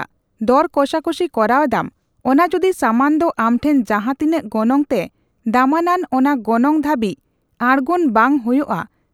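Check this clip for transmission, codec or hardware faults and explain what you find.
Nothing here points to a transmission, codec or hardware fault; the speech comes across without any problem worth flagging.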